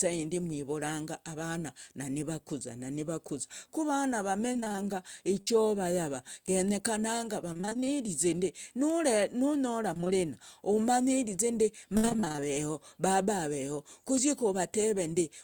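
Speech clip with repeated packet loss (robotic sound) at 4.53–4.87 s, 7.53–7.96 s, 9.94–10.26 s (just before "umanyirize ndi") and 11.97–12.44 s (between "umanyirize ndi" and "baba aveho"). In each stretch, short gaps of about 20 ms are patched by repeating the preceding audio. That covers roughly half of each span, up to a 62 ms gap in the last, and makes the sound choppy. A burst of packet loss at 5.41–5.54 s drops about 60 ms, which is bridged by a fading continuation of the last sound before the audio jumps ahead.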